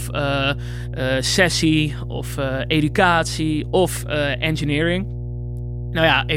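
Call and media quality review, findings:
Mains hum throughout, steady 60 Hz tone with low harmonics under the speech, roughly 10 dB down. Ground loop or nearby transformer coupling power line into the signal path.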